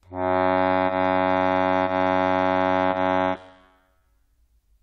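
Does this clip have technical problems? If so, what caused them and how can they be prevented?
Yes. The music has clock drift between sender and receiver. The sender's clock runs about 2 percent slow. So the receiver's jitter buffer keeps draining, and the playback stutters in small timing hiccups through the whole clip. Prevention: have the receiver measure the drift and resample the stream gently to match it, instead of letting the buffer run dry.

There are also four short stalls from a late packet, at 0.87, 1.85, 2.91 and 3.99 s. Each lasts about 40 ms. Each time, the buffer ran empty and the receiver held the last sound for about 20 ms. Then it resumed from the same point, so nothing is lost. The held sound has a faint buzz or dip. Each stall adds 20 ms of delay. The near one-second spacing fits the slow sender draining the buffer. Prevention: fix the drift and keep a slightly deeper jitter buffer, so late packets arrive before it empties.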